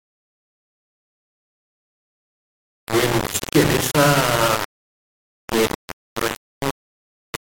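Throughout the speech, a harsh grainy distortion tracks every syllable, nearly as loud as the speech itself. The likely cause is low bit depth without dither, about 3 bits, rounded.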